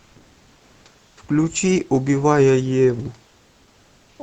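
Comfort noise replaces the background at 1.07 to 1.17 s and 3.27 to 4.19 s. The room noise turns flat, featureless and about 2 to 3 dB quieter, likely from Opus discontinuous transmission.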